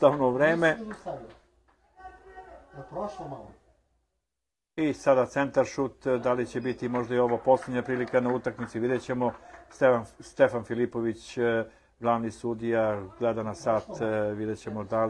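Nothing is technically wrong with this audio, so there are no times or causes to report.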